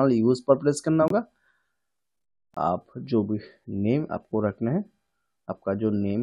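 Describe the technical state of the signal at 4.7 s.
Nothing at 4.7 s points to a technical fault, and the signal is intact at that moment.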